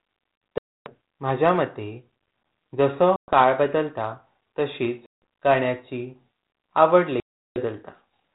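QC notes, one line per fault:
0.58–0.93 s, 3.16–3.33 s, 5.06–5.12 s and 7.20–7.61 s: packet loss on an ADPCM call. Each is a hard-edged silent hole, dropping 280, 120, 160 and 360 ms of the 32 kbit/s G.726 stream. The second ends just before "काळ बदलता तसिच". The third follows "जसों काळ बदलता तसिच". Silence fills each gap. The decoder's predictor and step size then disagree with the sender's. Speech resumes slightly distorted, settling within tens of milliseconds.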